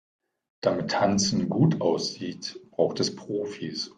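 No technical faults can be heard anywhere in the speech recording; the signal stays steady and continuous throughout.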